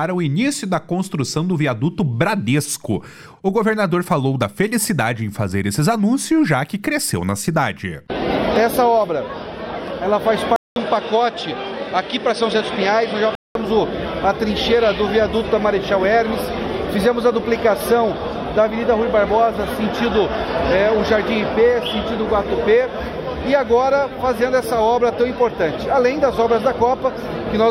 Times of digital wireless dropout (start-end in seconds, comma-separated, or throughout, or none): none